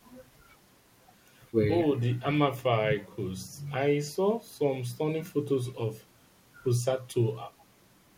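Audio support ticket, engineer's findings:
No audible faults found in the speech; nothing to attribute to any component on the path.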